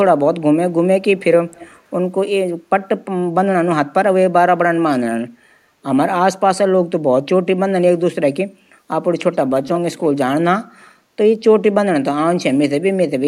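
Speech with echo leak at 1.51 to 1.76 s, 9.32 to 9.36 s and 9.67 to 9.8 s: faint delayed copies of the voice trailing by 208 ms, then 178 ms, the last strongest at about 15 dB below the speech. The likely cause is a far-end echo canceller passing loudspeaker pickup back.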